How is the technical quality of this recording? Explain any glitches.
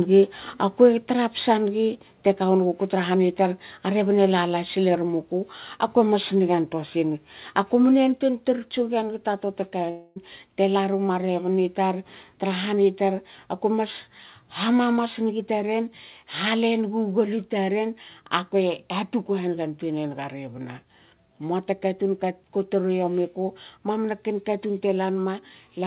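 The recording has several glitches: two sudden level drops, two brief distorted peaks and one short gap in the audio, all heard through a telephone-band call path that carries nothing above 4 kHz.

Microphone volume stepped down, at 1.02 s and 8.16 s: the whole signal, background included, drops abruptly by about 3 dB and then about 2 dB. The likely cause is call software lowering the device's input gain. Unlike a fade, each drop happens in one step and stays down.

Microphone overload, from 1.41 to 1.45 s and from 4.69 to 4.72 s: the loudest peaks likely go about 4 dB and about 2 dB past the converter's limit, and about 4% and 1% of the samples are flattened. The result is a harsh crackle on just those peaks. Codec noise would be spread throughout, not tied to loud moments.

Long network dropout, from 9.9 to 10.18 s: about 0.26 s of audio likely never arrived. The receiver filled almost all of that time by extending the last sound as a fading buzz, and when the audio resumed the missing part was simply gone. 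This distinguishes it from a short click-like packet loss.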